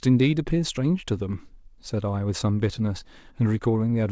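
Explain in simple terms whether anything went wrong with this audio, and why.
Nothing stood out on listening to this speech, which sounds like it came through an ordinary call connection whose sound tops out at about 8 kHz, the normal limit for that kind of call.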